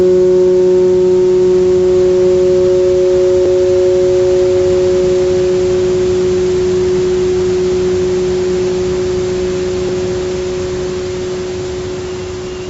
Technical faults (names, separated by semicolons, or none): gain pumping; dropped buffer (overrun)